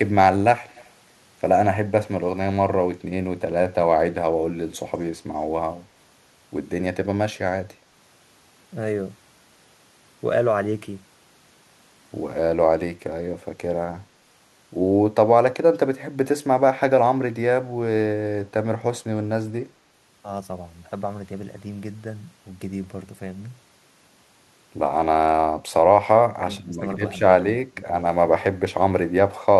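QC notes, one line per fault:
0.69–0.89 s, echo leak: a faint, delayed copy of the speech trails the original by about 0.2 s, sitting roughly 30 dB under it. The likely cause is a far end on loudspeaker whose echo canceller didn't fully scrub what its mic picked up, sending that leftover back down the line for a brief moment.
26.43–26.81 s and 27.72–27.92 s, speech suppressed in double talk: the speech ducks twice. First it drops by about 10 dB for around 0.4 s, then more sharply, around 20 dB, for about 0.2 s, so it sounds pushed back or partly swallowed. This is likely the echo canceller clamping down while both ends talked at once, unable to separate the near talker from the loudspeaker echo and turning everything down.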